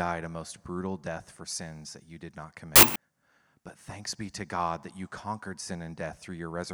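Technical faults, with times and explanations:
2.76–2.96 s, wrong sample width: after "that you did not", 16-bit samples read as packed 24-bit pair mismatched bytes, giving loud noise with the speech buried and 1.5 times too fast.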